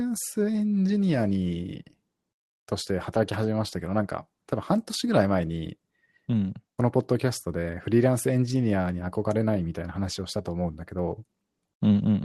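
The speech shows no technical faults, and the WebRTC call path it passed through is working as expected, with the spectrum topping out around 12 kHz in a way that fits Opus coding at a modest call bitrate.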